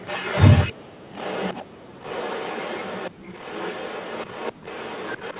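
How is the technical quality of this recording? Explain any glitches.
The recording carries a faint delayed echo, heard against a narrowband call sound that stops at 4 kHz.

Echo leak, 0.05–0.73 s, 1.13–1.65 s and 2.0 s to the end: a second copy of the speech trails about 0.35 s behind, roughly 15 dB down and later fainter. This is likely a far-end loudspeaker echo that the echo canceller failed to fully remove.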